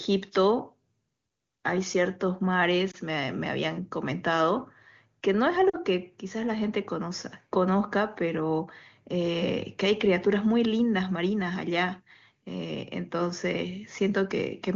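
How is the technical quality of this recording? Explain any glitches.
The recording has two short dropouts from lost AMR speech frames. The speech comes through wideband AMR (HD Voice), and its clean, wideband sound fits one of the higher AMR-WB rates.

Lost AMR speech frames occur at 2.91 to 2.96 s and at 5.69 to 5.78 s. Radio errors corrupted the frames so they failed their checksum, and the decoder filled each gap by repeating the last good pitch and vocal-tract parameters at falling gain. The first event is a single 20 ms frame, heard as a brief dip or warble. The second loses two frames, about 40 ms, so the sound drops to near silence within two frames, as wideband concealment does, before speech returns briefly weak or rough.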